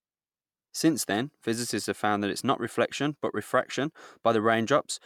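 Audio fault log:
No faults detected in this speech recording; nothing to log.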